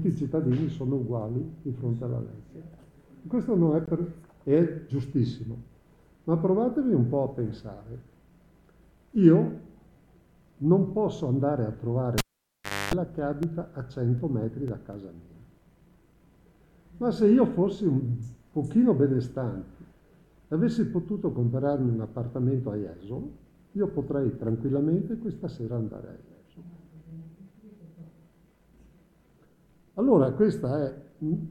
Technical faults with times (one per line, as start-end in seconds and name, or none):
3.86-3.88 Bluetooth stall
12.18-12.94 cable pulled and plugged in
13.18-15.93 periodic USB or driver dropouts